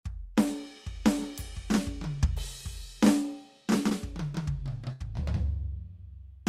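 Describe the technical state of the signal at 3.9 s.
At 3.89 to 3.93 s the music has a short concealed packet loss. About 20 ms of audio never arrived in time. The receiver continued the preceding sound for roughly 13 ms, then crossfaded back. It comes across as a brief smear or wobble.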